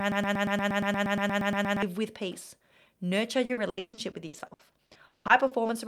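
Right from the top, the clip is already stuck in a broken-record loop that runs until about 1.83 s. A fragment of about 118 ms plays back to back, roughly fifteen times, likely because the player or stream stalled and kept resending its last chunk. Whatever should have played there is gone.

From about 3.45 s to 5.67 s there's repeated packet loss, which gives it that choppy, robotic sound. Seventeen holes get patched by stretching the previous sound, adding up to 880 ms, or about 40% of the stretch. The longest hole is 180 ms.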